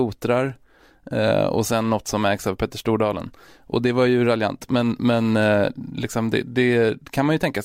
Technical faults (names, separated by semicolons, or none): none